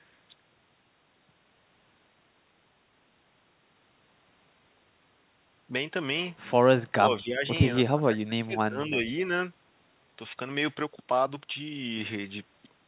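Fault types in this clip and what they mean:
Speech suppressed in double talk: the speech level drops sharply from 6.9 to 7.44 s and again from 7.84 to 9.06 s, by roughly 25 dB and then about 30 dB, leaving the talker faint or broken for around a second and a half in total. The likely cause is an echo canceller that, with both ends talking, could not separate near speech from loudspeaker echo and turned both down.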